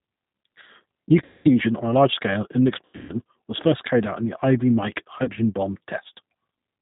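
Throughout, the speech carries the rough, slightly synthetic texture of the G.729 codec at 8 kbit/s. Each 10 ms frame is rebuilt from a vocal tract filter, a pitch predictor and sparse pulses. On a spectrogram, nothing appears above 4 kHz, and the harmonics look smeared.

VoIP packet loss concealed by the speech codec then occurs three times. From 1.24 to 1.49 s, about 210 ms of audio is missing. The decoder repeats its last pitch and filter, so the sound stretches into a buzzy tone or coloured noise that fades, and it stays weak as the next frames build on it. The waveform shows a regular, shrinking pattern, and the spectrogram shows flat, repeated harmonics. From 2.85 to 3.14 s, between "large scale in an" and "was first carried out", a similar 210 ms is lost in scattered gaps across about 240 ms, the longest run being 120 ms. This gives broken, weak or distorted stretches, which appear as patchy, smeared bands. 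Around 5.24 to 5.32 s, a short 30 ms gap, pointing to a single lost packet, makes a brief blur.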